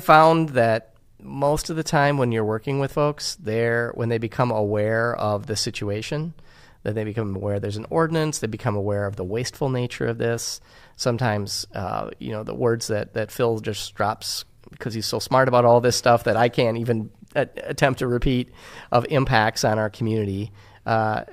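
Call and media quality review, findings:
No audible faults found in the speech at any point; no symptoms to attribute to a component.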